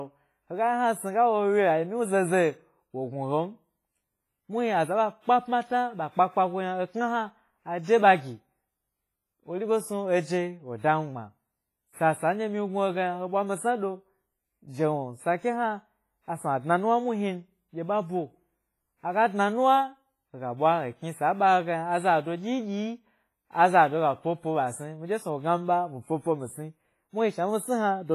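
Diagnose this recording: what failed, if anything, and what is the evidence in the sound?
WMA compression, throughout the clip, at the codec stage: the speech sounds washy and ringing, with hiss that swells and fades with the signal and nothing above 15.5 kHz. Heavy damage like this is likely a Windows Media Audio encode at a low bitrate near 24 kbps, coarsely quantising long transform blocks.

Pre-echo, at 7.83 s and 10.78 s, also from the codec: short hiss runs ahead of sharp onsets by about 44 ms and 55 ms, blunting each attack. Quantisation noise sized for the loud onset spreads across the whole block, filling the quiet lead-in.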